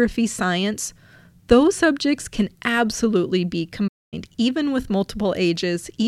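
At 3.87 s the player most likely ran short of data or had its thread blocked, causing a playback stall: right after "subjects can absolutely be" the speech cuts to silence for about 0.24 s, then resumes at 4.14 s with "even with".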